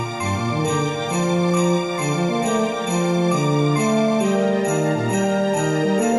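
Nothing stood out as a technical fault on listening.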